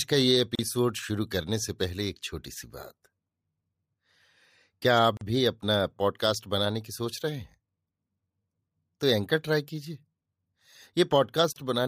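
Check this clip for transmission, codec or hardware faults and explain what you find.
Three short dropouts break the speech. Gap at a join of encoded pieces, at 0.55–0.59 s (35 ms), 5.17–5.21 s (42 ms) and 11.52–11.56 s (36 ms): separately encoded segments were spliced untrimmed, leaving encoder delay and end padding as abrupt silences with smeared edges before the speech resumes where it stopped.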